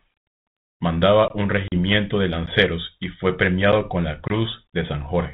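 At 1.28 to 1.30 s the speech drops into a block of digital silence about 20 ms long. The sound cuts out and returns with no fade, so it sounds like a short hole. From 1.68 to 1.73 s comes packet loss on an ADPCM call. About two packets, 40 ms of audio, are replaced by silence. The call runs over G.726 ADPCM at 32 kbit/s, with light coding damage and nothing above 4 kHz. After the gap, the receiving decoder's predictor and step size no longer match the sender's. The speech comes back with some distortion, then settles. At 2.46 s, just before "y fue", another block of digital silence cuts out about 12 ms. The length fits a 512-sample buffer left unfilled in time, and it is heard as a tick. At 3.72 s, between "y fue" and "con la", an 8.5 ms dropout gives a similar tick. At 4.28 to 4.31 s, just after "con la", about one packet is lost, 20 ms of silence. The decoder again returns out of step, with brief distortion.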